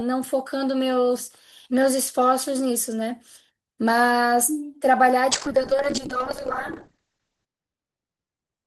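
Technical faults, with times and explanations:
5.30 to 8.67 s, call bitrate drop: the call's bandwidth estimate fell and the encoder had to work with far fewer bits, which sounds like a fall from around 32 kbps to about 8 kbps. The speech turns rough and watery, and the top end is cut from 20 kHz to 8 kHz. It bottoms out for about 2.15 s and doesn't recover before the end.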